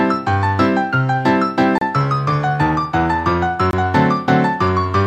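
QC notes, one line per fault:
1.78–1.82 s and 3.71–3.73 s, Bluetooth stall: the sound drops to silence for about 33 ms, then 22 ms, before resuming. Likely a wireless dropout where the buffer briefly ran dry.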